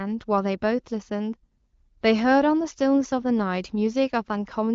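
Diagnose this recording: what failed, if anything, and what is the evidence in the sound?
Nothing failed: the speech shows the band limit of an AMR wideband (HD Voice) path, with no content above about 7.3 kHz and a texture that points to one of the codec's higher rates, around 15.85 kbit/s, and no stage from capture through to playback shows a fault.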